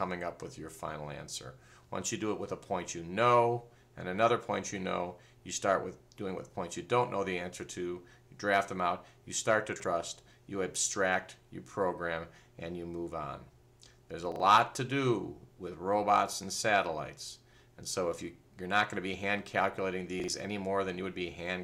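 At 9.76, 14.32 and 20.2 s you get the same glitch: chunks out of order. Each time, a 40 ms slice of audio turns up one chunk late, so it swaps places with its neighbour across an 80 ms stretch. Nothing goes missing, but the sound steps forward, jumps back, then rejoins, leaving three hard joins. It comes across as a brief jumbled stutter rather than a dropout.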